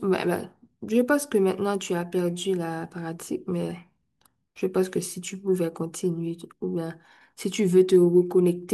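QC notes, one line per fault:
No fault found in this speech clip.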